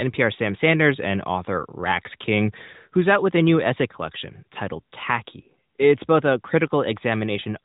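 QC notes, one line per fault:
No faults heard in this speech clip.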